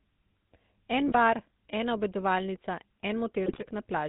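A buzzy, gravelly roughness runs through this speech clip, with nothing above 4 kHz: the GSM full-rate codec, whose pulse-driven vocal-tract model at 13 kbps leaves plainly audible damage. Brief squawks and gargling break in from 1.08 to 1.15 s, just before "bar ena obedovalnica", and from 3.46 to 3.69 s. These are GSM bit errors: corrupted filter, pitch and gain values distorting 3 and then 11 frames.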